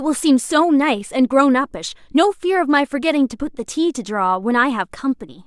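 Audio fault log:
No audible faults found.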